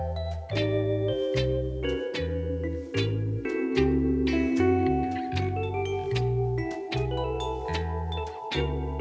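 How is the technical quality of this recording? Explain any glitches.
No glitches to report: the audio shows only the band limit of a wideband call path, with nothing above 8 kHz, which fits a G.722 codec.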